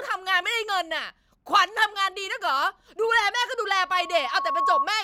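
From 3.81 s to 4.88 s a steady whistle at 1.1 kHz rises out of the speech, swelling over roughly a second until it sits a few decibels above the talker. That is loudspeaker feedback squeal: the microphone is hearing the loudspeaker it drives, and at 1.1 kHz the round-trip gain exceeds one, so that single frequency keeps reinforcing itself on each pass around the loop until the squeal stops at 4.88 s.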